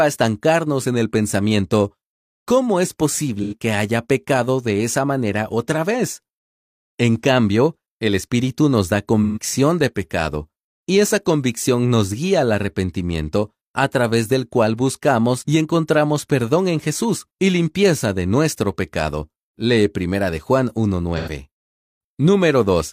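At 3.42, 9.23 and 21.17 s there's AAC frame loss with concealment: brief smeared, noisy patches of about 85, 128 and 85 ms, which fits two or three lost frames, where the decoder padded the gaps from the last good spectrum.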